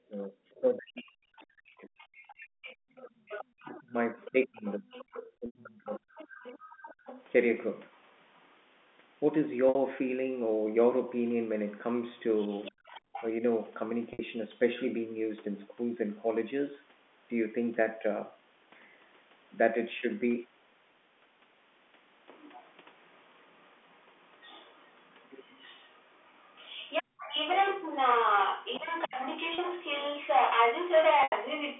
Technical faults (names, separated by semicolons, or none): speech suppressed in double talk; other side's voice leaking through; background gated by the echo canceller; packet loss with pitch repetition